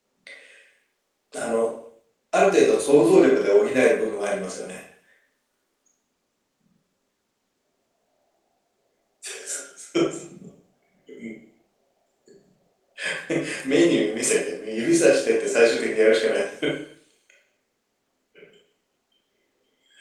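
Speech recording with no technical faults to report.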